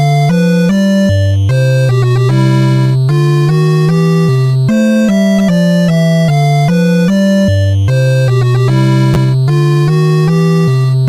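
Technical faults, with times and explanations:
9.14–9.16 s, chunks out of order: a 10 ms chunk plays one slot late, causing a brief jumbled moment; three abrupt waveform discontinuities show as thin vertical spectrogram lines.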